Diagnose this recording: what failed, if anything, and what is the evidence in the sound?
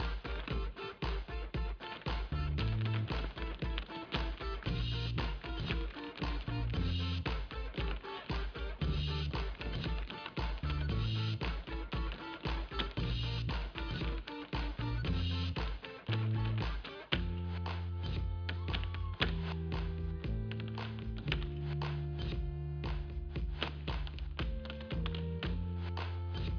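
Nothing failed: no stage in the chain, from analogue wiring through conversion, buffering, processing, transmission and storage to playback, leaves an audible fault anywhere in this recording.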